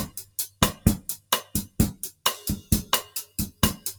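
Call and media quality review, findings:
Noise suppressor applied to music or sounds: a speech-tuned suppressor is active across the whole clip and treats held tones, ambience and decays as noise. Gain swings by roughly 15 dB, so attacks pass while sustains and tails sink, giving pumping, fluttery, thinned sound.

Sound cut by the noise suppressor: 0.24–0.85 s, 1.17–1.78 s and 3.07–3.62 s. The suppressor misreads sustained content as noise and pulls it down by about 16, 16 and 14 dB at its deepest. Held portions sag and decays truncate, each dip lasting a few hundred milliseconds.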